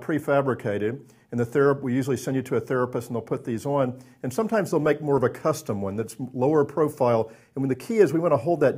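No technical fault can be heard anywhere in the audio. There is nothing to place at a time or trace to a cause.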